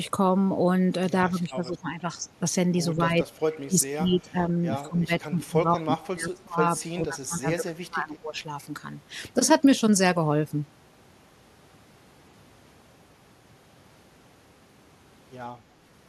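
From 1.26 to 2.24 s, then 2.97 to 4.66 s and 4.82 to 8.37 s, the speech keeps ducking, by about 10 dB at first, then deeper, near 25 dB. That's speech suppressed in double talk, likely an echo canceller mistaking the talker for echo.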